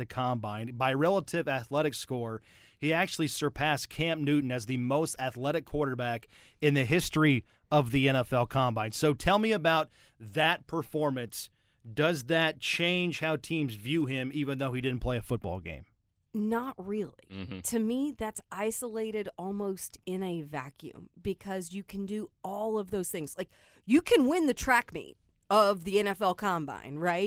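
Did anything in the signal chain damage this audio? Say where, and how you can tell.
No, nothing in the chain has damaged this speech: the Opus voice compression, in hybrid mode at 24 kbps with the full band kept, leaves only the light coding texture expected at that rate.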